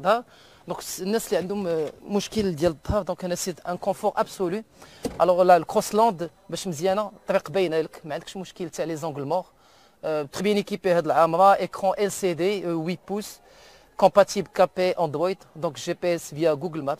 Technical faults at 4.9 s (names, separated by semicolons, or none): none